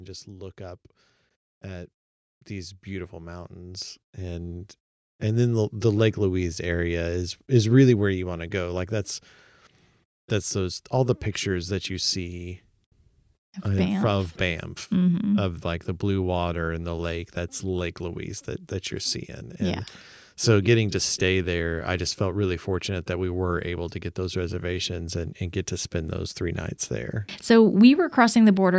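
Automatic gain rising affects this speech recording: the call's gain control judged the incoming level too low and kept raising its gain, slowly, from 0.25 s to 26.85 s, adding about 16 dB in total. Because the gain acts on everything at once, the voice and the background noise swell together across nearly the whole clip. They grow steadily louder rather than jumping, heard through call microphone processing that leaves nothing above 8 kHz.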